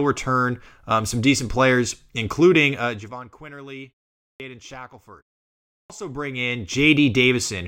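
Speech, with two clipped starts after a pause. At 4.16 s, following a pause of about 0.31 s, the speech resumes abruptly and the first 0.24 s is missing. At 5.69 s, after a 0.55 s pause, about 0.21 s is lost in the same way. In both cases the output device has dropped into a sleep state during the brief silence and needs time to wake or relock, so the onset of the next sound is swallowed.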